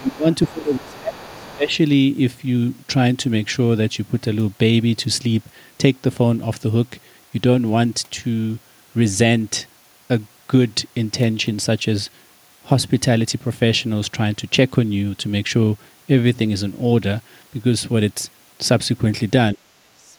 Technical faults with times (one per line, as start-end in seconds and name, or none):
0.00-1.73 speech suppressed in double talk
0.10-0.49 other side's voice leaking through
1.15-1.57 other side's voice leaking through
19.54-20.17 speech suppressed in double talk